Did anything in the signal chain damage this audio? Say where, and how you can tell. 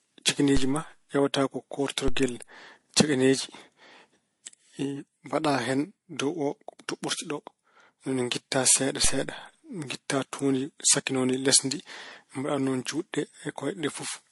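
Yes. The codec stage shows damage throughout. Nothing survives above about 11.3 kHz, and the artefacts of the different codecs are heard together. That points to transcoding between lossy codecs, likely an AAC encode at around 48 kbit/s re-encoded to MP3 at a similar rate.

A DC step occurs at 0.57, 2.08 and 9.05 s. Each is a low thump under unchanged speech. The waveform's zero line jumps, then drifts back as a roughly 2 Hz high-pass drains the offset. This suggests a converter recalibrating or an offset input switching in.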